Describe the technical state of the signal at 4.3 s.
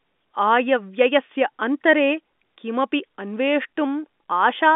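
At 4.3 s the speech is intact, with no fault, carried through the ordinary telephone band of G.711 coding with nothing audibly wrong at that moment.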